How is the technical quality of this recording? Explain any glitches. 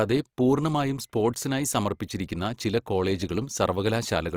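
The technical quality is noticeably compromised by one fault running through the whole clip.

Opus compression, throughout: the speech sounds grainy and rough, with a noisy, hashy texture on its tonal parts rather than a swirling one. The likely cause is a low-bitrate Opus encode in its transform (CELT) mode, which fits roughly 24 kbps. The coder keeps each band's overall energy but, short of bits, refills fine detail by folding lower bands or injecting noise. Bandwidth stays full, reaching about 20.2 kHz.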